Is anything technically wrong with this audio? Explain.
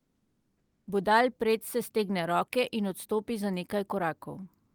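Yes, there's comfort noise in place of the background from 0.0 to 0.87 s. The real room sound is swapped for a flat, featureless hiss about 4 dB quieter, sitting about 47 dB below the loud parts. It's likely discontinuous transmission, as in Opus DTX, with the receiver synthesising filler noise until the speech kicks in.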